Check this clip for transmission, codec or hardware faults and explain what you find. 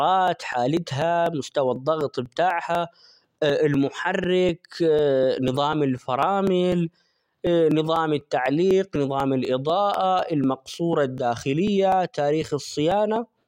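One fault is present: periodic USB or driver dropouts. They run through the speech from 0.28 s to 13.41 s. A small gap recurs every 0.25 s, around fifty in all. Each time, something blocks the USB bus or audio driver on a fixed schedule. About 2 ms of audio is skipped rather than replaced with silence. Each skip leaves a tiny discontinuity. The result is a steady train of ticks, heard only while speech is sounding.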